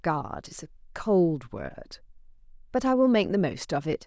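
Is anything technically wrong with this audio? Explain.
No, nothing technically wrong stands out here; the speech comes through steady and intact the whole way, with nothing to flag.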